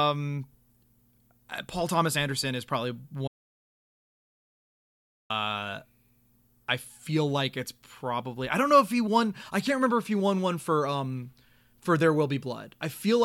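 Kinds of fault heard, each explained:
Audio dropout to silence: the input was likely lost while recording carried on, so the speech cuts off after "is probably" and about 2.0 s vanish into dead silence.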